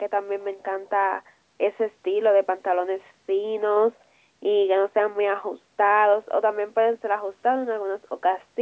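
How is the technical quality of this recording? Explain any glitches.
No glitches to report; the speech carries the expected signature of call microphone processing, with the band topping out at 8 kHz and the lowest bass trimmed by its high-pass filter, both normal for that path.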